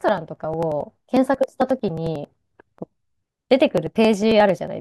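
Speech, with periodic USB or driver dropouts from 0.09 s to 4.68 s. Every 0.09 s, a slice of roughly 10 ms is skipped outright. That gives about fifty regular ticks. Something blocks the bus or audio driver on a fixed cycle.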